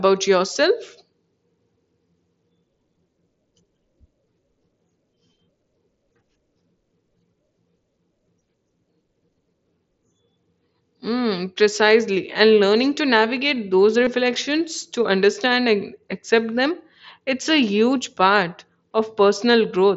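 At 0.54 s and from 14.04 to 14.07 s, after "learning to navigate those", concealed Bluetooth headset packet loss patches gaps of 7.5 and 22.5 ms with repeated recent waveform. The first is nearly hidden; the second briefly buzzes, showing as periodic repeats and flat horizontal spectrogram bands.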